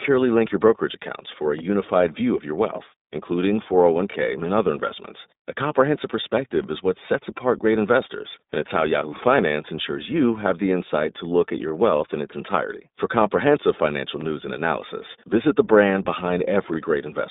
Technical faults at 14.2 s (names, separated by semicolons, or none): iLBC codec; overlapping chunks